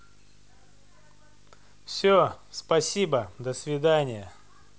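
Video or display buzz runs through the whole of this speech clip: a 50 Hz buzz with hash above it, sitting roughly 35 dB below the speech. A screen or video cable is coupling into the audio path, injecting interference at the picture's field rate.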